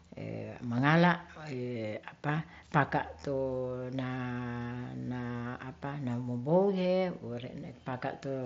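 No technical faults detected.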